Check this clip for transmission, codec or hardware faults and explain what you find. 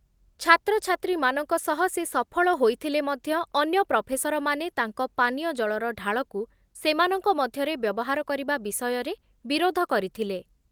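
No faults can be heard anywhere in the speech.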